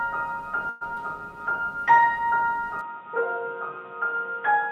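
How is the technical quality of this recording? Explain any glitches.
The recording has three glitches: two brief network disruptions near the start and a drop in fidelity for the last stretch.

From 0.69 to 0.83 s there is a call audio freeze. Packets were most likely delayed in transit and the jitter buffer ran dry. The receiver stretched the last sound into a fading buzz or hiss for about 115 ms, then resumed where it stopped. Nothing is lost, but playback now runs 115 ms later.

Around 0.95 to 0.98 s there is short concealed packet loss. About 40 ms of audio never reached the decoder, and only about 12 ms was patched by extrapolating the preceding sound. Playback skips ahead by roughly 30 ms, recovering part of the earlier delay. This is heard as a quick smear or wobble.

At 2.81 s the input switched to a poorer device, most likely a different microphone or a headset call profile. There is no gap at the switch. 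From there to the end nothing above 3.8 kHz comes through, so the sound turns dull and boxy. The level drops by roughly 5 dB, and a new background noise sits about 35 dB under the signal.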